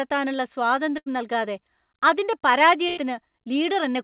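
A burst of packet loss struck twice, at 0.98 to 1.08 s and 2.88 to 2.99 s. The receiver stretched the last sound for about 80 ms and 90 ms, fading it into a buzz or hiss, then jumped ahead within the 4 kHz-limited, G.711-like band.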